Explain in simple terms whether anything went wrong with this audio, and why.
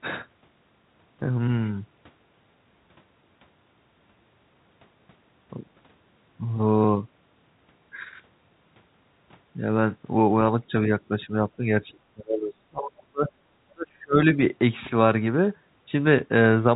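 Yes, something went wrong. The talker's speech is suppressed in double talk. It dips briefly at 10.62, 11.09, 11.57 and 14.35 s. It nearly vanishes from 11.79 to 13.41 s and from 13.73 to 14.17 s. This likely happened because an echo canceller muted the talker while the other side spoke too.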